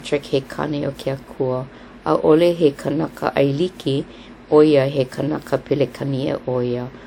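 Across the whole speech clip the sound has a swirly, hollow quality, with smeared consonant attacks and a watery texture that a single encode at around 128 kbit/s would not produce, even though content still reaches about 20.1 kHz. This is generation loss, likely from repeated lossy re-encoding, around ten passes through a WMA-type codec. Each pass requantises on a shifted frame grid, so noise and spectral holes compound rather than staying fixed.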